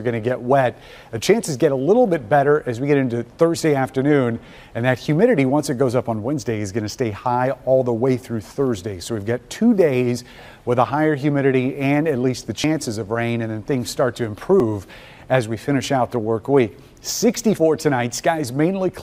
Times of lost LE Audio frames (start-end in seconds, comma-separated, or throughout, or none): 4.49-4.57